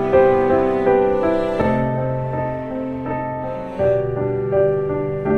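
From about 1.61 s to the end there's channel delay doubling: one channel runs roughly 46 ms late, which fits a 2048-sample buffer, and once summed to mono the late copy sits at equal level, giving a doubled, slapback echo on everything.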